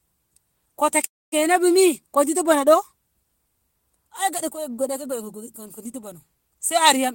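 At 1.05 s the speech hits a call audio freeze that lasts until 1.34 s, right before "bumi ko ditu bono". The last bit of sound carries on as a short, fading buzz, then drops to silence for about 0.23 s. Likely the packets got held up and the jitter buffer ran dry. When they arrived, the speech picked up where it stopped, so nothing's lost, but everything after is pushed back about 0.27 s.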